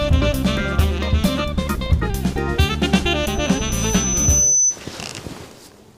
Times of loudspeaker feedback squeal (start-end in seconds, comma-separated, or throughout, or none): 3.23-4.80